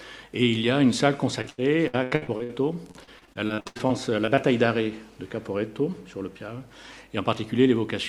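The audio breaks up from 1.41 to 2.51 s and again from 2.91 to 4.39 s with repeated packet loss (robotic sound). Holes up to about 80 ms are patched by stretching the preceding sound, covering roughly 38% and 26% of each stretch. The result is choppy, with pieces missing. A single dropout leaves one clean hole, but here the gaps recur in quick succession, giving a stuttering texture throughout each span.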